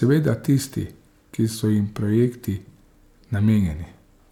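Nothing goes wrong anywhere in this speech recording; there's no dropout, glitch or other technical fault to point to at any moment.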